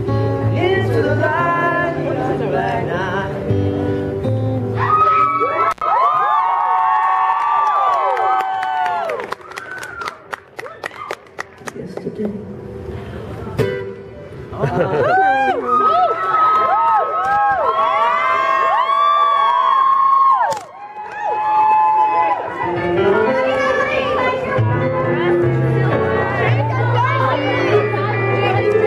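An intermittent contact fault occurs from 5.71 to 5.82 s. A loose cable or plug briefly loses connection, so the sound drops out for about 90 ms, with a crackle as the contact breaks and remakes, and faint hiss while the line is open.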